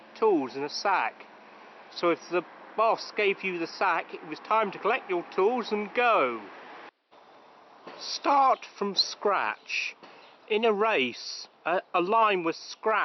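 No technical faults can be heard anywhere in the clip, and the signal stays stable throughout.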